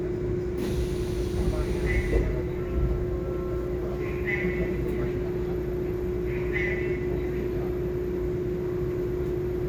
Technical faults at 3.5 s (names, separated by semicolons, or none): none